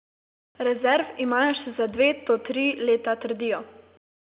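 No faults found in the speech; the band tops out near 4 kHz with a faint level-following quantisation noise beneath it, consistent with G.711 mu-law telephone coding at 8 kHz.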